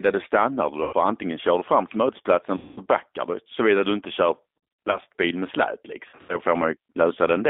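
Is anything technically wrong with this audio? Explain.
Yes. Throughout the speech, the G.729 codec is plainly audible. An 8 kbit/s coder rebuilds each frame from a filter, pitch and a few pulses, giving rough, synthetic texture inside a 250 Hz to 3.6 kHz band. Simple band-limiting would narrow the sound without that rough, synthetic grain.

VoIP packet loss concealed by the speech codec occurs at four points: 0.83 to 0.95 s (100 ms lost), 2.57 to 2.81 s between "du fram till mötesplatsen" and "backar du" (200 ms), 4.87 to 4.98 s between "du inte kör" and "med släp" (200 ms scattered over 400 ms, longest run 60 ms), and 6.09 to 6.39 s after "med släp" (160 ms over 200 ms, longest run 80 ms). The decoder stretches its last pitch and filter into a fading buzzy tone rather than leaving silent gaps, which sets it apart from plain dropouts.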